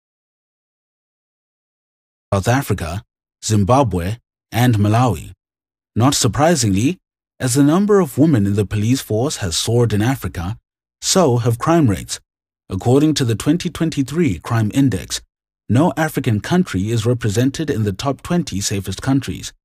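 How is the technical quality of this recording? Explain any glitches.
The recording has one clear glitch, at the very start. Audio dropout to silence runs from 0 to 2.32 s. The input was likely lost, so silence was written, leaving dead silence with no room tone before the speech comes in.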